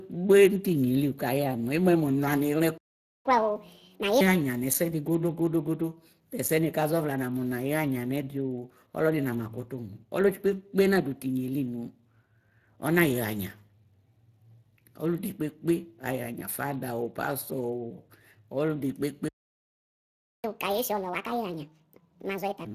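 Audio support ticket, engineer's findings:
Speex codec, whole clip: hoarse, noisy CELP texture with a shaped noise fill in the upper band and nothing above 15.2 kHz. The damage fits a Speex stream around 22 kbps, with buzzy excitation rather than transform-codec warble.

Playback stall at 2.78–3.25 s (0.48 s) and 19.28–20.44 s (1.16 s): output goes fully silent mid-flow. Likely cause is a buffer underrun or a blocked player thread. True silence, with no concealment noise or repeated fragments as in packet loss.

Catch-up at higher speed at 3.25–4.21 s and 20.44–22.65 s, right after each stall: playback runs at 1.5x with pitch up roughly seven semitones, then returns to normal. The player resamples its backlog, unlike pitch-preserving time-stretch.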